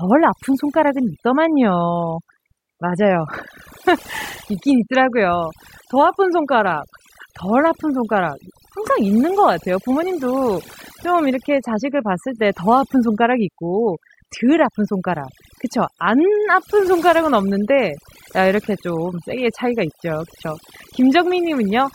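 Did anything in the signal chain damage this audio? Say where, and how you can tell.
Yes. Overdone noise removal in the call-processing stage runs throughout: gaps between phrases drop to near silence sprinkled with twinkling specks. A suppressor set too hard is gating individual frequency bands near its noise estimate, unlike codec warble, which persists without silent, sparkling pauses.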